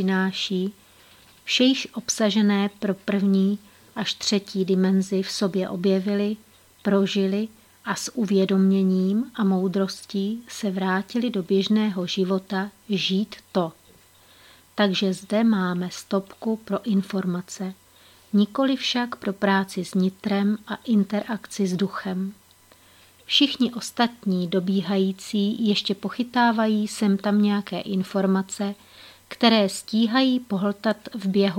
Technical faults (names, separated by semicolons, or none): none